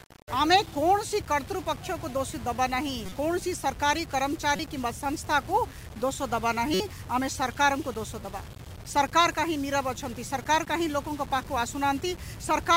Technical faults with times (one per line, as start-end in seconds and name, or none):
0.00-12.76 low bit depth without dither
3.06-3.12 corrupt frame decoded
4.56-4.59 corrupt frame decoded
6.73-6.80 corrupt frame decoded